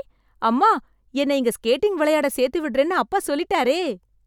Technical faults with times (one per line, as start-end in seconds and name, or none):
none